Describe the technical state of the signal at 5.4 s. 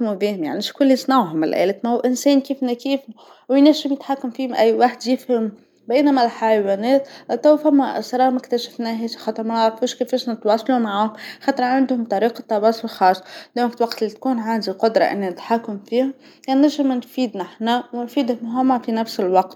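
At 5.4 s the speech signal is intact, with no fault audible at that moment.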